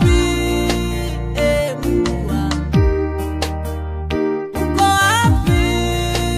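No faults are audible anywhere in the clip, so there is nothing here to report.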